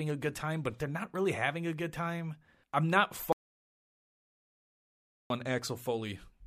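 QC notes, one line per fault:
3.33–5.30 s, audio dropout to silence: input likely lost after "good time I'm not", silence written for about 2 s, so speech cuts to dead silence without room tone.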